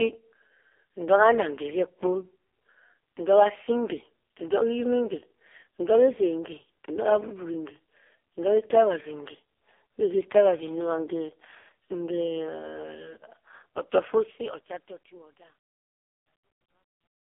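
From start to end the speech sounds buzzy and synthetic, boxed into a telephone band of roughly 300 Hz to 3.5 kHz with nothing at all above 3.5 kHz. This is the AMR narrowband mobile codec at heavy damage. The codec rebuilds the voice from a coarse vocal-tract model fed by sparse pulses, and so little detail survives that it fits the lowest 4.75 kbps mode.

From 14.02 s the closing fade-out, which runs from about 14 s to 17.3 s, turns gritty. It is at its worst from 15.14 s to 17.26 s. This is truncation distortion on a fade: the gain stage kept too few bits and added no dither, which fits an 11-bit path. As the level sinks, the waveform collapses into a few coarse steps.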